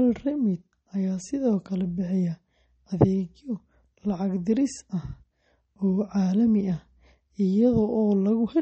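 Likely low-bitrate MP3 compression, around 32 kbps by the sound, runs throughout: nothing survives above 8.4 kHz, and the speech carries a plainly audible watery, swirling smear.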